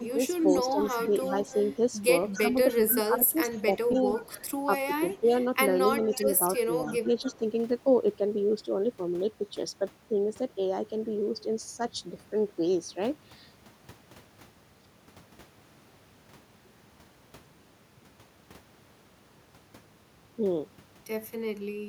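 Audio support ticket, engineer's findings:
Echo leak at 0.4–1.76 s, 2.34–4.51 s, 6.1–6.57 s and 7.2–7.37 s. Delayed copy of the speech trails it by 292 ms. About 15 dB below the direct speech at first, about 20 dB below later. Likely cause: far-end loudspeaker echo not fully cancelled. Residual returned to this side.

Speech suppressed in double talk at 0.0–0.2 s, 2.38–5.32 s and 5.98–7.42 s. Speech dips by up to about 10 dB, in pieces. Only about a tenth of a second affected in the first span, about 0.7 s in the second, about 0.4 s in the third. Likely cause: echo canceller misjudging overlap as echo and attenuating the local talker.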